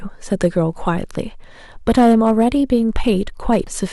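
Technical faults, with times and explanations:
0.44–0.46, 1.88–2.45 and 3.52–3.57 s: hard clipping. Speech peaks overdrive a stage by about 2, 5 and 4 dB respectively, so the waveform tops are sliced flat. The result is harsh crackle, with broadband harmonic smear visible high up on a spectrogram.
3.67 s: compressed frames skipped. About 70 ms of speech never plays, so the sound jumps ahead. The waveform shows a continuity break.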